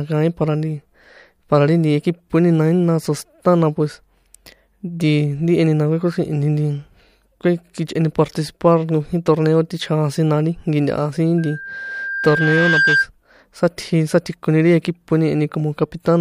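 A speech recording in which, from 11.38 to 13.08 s, a steady 1.6 kHz tone swells over about a second and a half into a squeal standing a few decibels above the voice. This is loudspeaker feedback squeal: the microphone re-amplifies its own loudspeaker until that frequency runs away.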